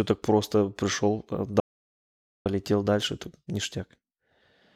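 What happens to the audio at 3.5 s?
Nothing goes wrong at 3.5 s; the speech runs through that moment intact, with no dropout, click or distortion to be heard.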